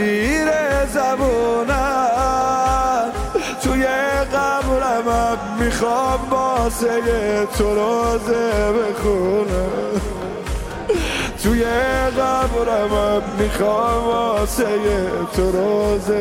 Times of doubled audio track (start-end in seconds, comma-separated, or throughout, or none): none